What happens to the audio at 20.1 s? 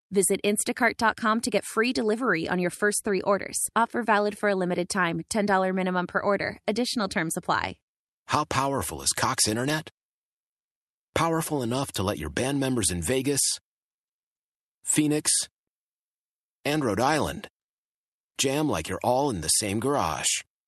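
At 20.1 s the speech carries on intact, with nothing breaking into it beyond the ordinary coding character of the call path it travelled through.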